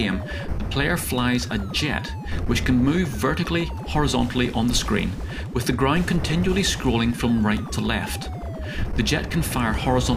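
From 3.60 s to 5.27 s there are CD scratch ticks: seven short clicks at a steady rate of about four per second, the longest only a few milliseconds. Once per disc revolution a surface blemish corrupted more data than error correction could repair, leaving the player to patch or mute the damaged samples.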